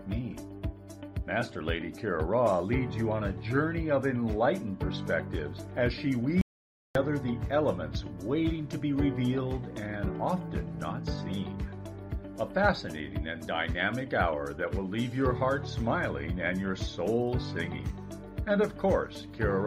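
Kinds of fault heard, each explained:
Audio dropout to silence: The sound cuts off mid-flow at 6.41 s and resumes at 6.95 s, leaving about 0.54 s of total silence with no room tone. The input was likely lost briefly while recording continued writing silence, so that stretch is gone.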